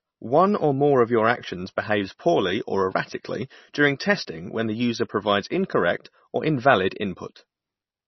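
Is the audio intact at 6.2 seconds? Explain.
No. At 6.2 seconds the speech carries the same damage heard from start to finish. The sound is dull, with nothing above 5.9 kHz. Weak detail flickers in and out, giving a watery, swirling texture. S sounds turn metallic, and attacks blur. The likely cause is heavy MP3 compression at a very low bitrate. Short of bits, the encoder cut all treble at a fixed point and dropped quiet frequency lines frame by frame.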